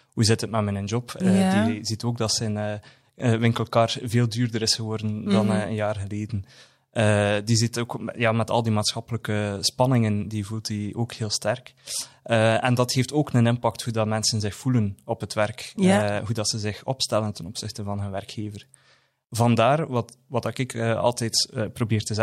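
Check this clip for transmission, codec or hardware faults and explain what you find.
Nothing turns up here: the speech comes through steady and intact, with no dropouts, glitches or odd artefacts to flag.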